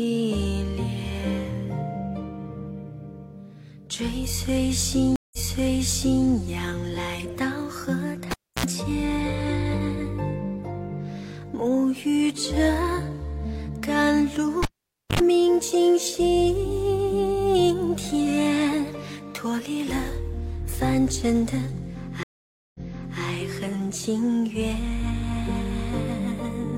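Stream reconnect at 5.16 to 6.26 s: the connection drops, leaving a 169 ms silence. A fresh decoder then resumes 929 ms earlier, so a stretch of audio repeats.

Cable pulled and plugged in at 8.31 to 8.66 s: a pop is followed by 300 ms of near silence. A 70 ms burst of 60 Hz mains buzz comes as the tip touches, then a second pop.

Cable pulled and plugged in again at 14.63 to 15.20 s: this time there is 522 ms of near silence, then 74 ms of 50 Hz hum before the return pop.

Stream reconnect at 22.23 to 23.21 s: a 513 ms silence, after which playback restarts 464 ms back, replaying audio just heard.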